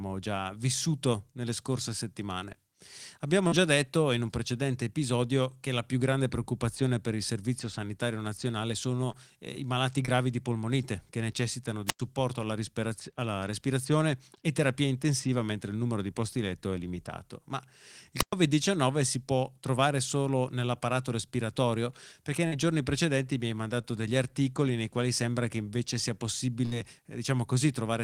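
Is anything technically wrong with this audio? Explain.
Yes, there are three kinds of dropout in this speech.

Short concealed packet loss shows up six times: 2.39–2.43, 3.47–3.54, 9.12–9.15, 10.05–10.09, 22.47–22.54 and 23.82–23.86 s. Each time about 20 or 40 ms of the stream arrived too late, and the decoder patched the hole by extending the preceding sound, so you hear a quick smear or wobble.

There are two wireless microphone squelch dropouts, at 11.86–12.00 s and 18.17–18.33 s. The FM signal faded enough for the receiver's squelch to kick in, muting the output for roughly 96 ms and 115 ms. You get a brief hiss, near silence, then the sound coming back.

A burst of packet loss at 26.66–26.74 s drops about 60 ms in one go. The receiver carries the last sound forward and fades it down, giving a held buzz or fading hiss. Then the audio resumes further along with that chunk gone.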